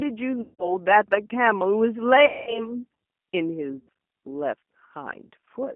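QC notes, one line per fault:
Throughout: G.729 codec, the speech comes through band-limited to roughly 200 Hz–3.4 kHz with a rough, synthetic edge, which fits an 8 kbit/s G.729A low-rate coding path.
0.41–0.76 s, 2.26–2.70 s, 3.78–3.89 s: VoIP packet loss concealed by the speech codec, about 180, 210 and 90 ms of audio went missing. The decoder stretches its last pitch and filter into a buzzy tone or coloured noise that fades, and the speech stays weak briefly afterwards.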